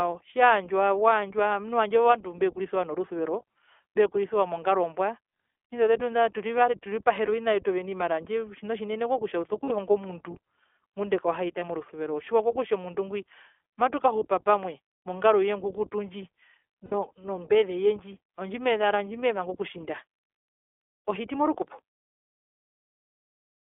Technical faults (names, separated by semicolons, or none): iLBC codec; lost iLBC frames